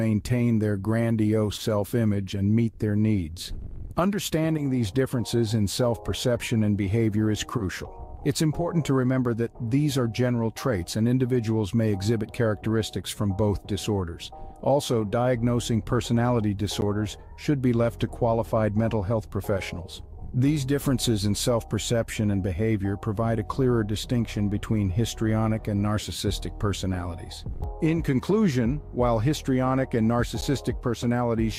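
At 16.81 s and again at 30.41 s there's a block of digital silence, about 10 ms of silence, likely where the output buffer wasn't filled in time, heard as a tick.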